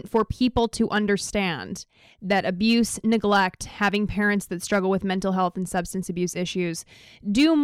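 A gain stage in the speech chain is being driven past its ceiling by about 2 to 4 dB, so the loudest peaks are sliced flat, which is hard clipping. It happens at 0.15–0.98, 2.31–2.75, 3.12–3.46, 3.82–3.96, 4.72–4.79, 5.42–5.79 and 7.39–7.46 s. The squared-off tops add harmonics high in the spectrum, heard as crackle on the louder syllables in each stretch.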